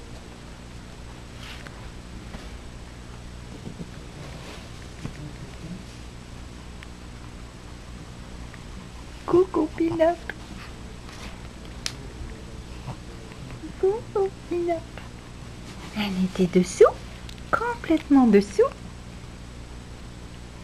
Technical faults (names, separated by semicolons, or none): DAB burbling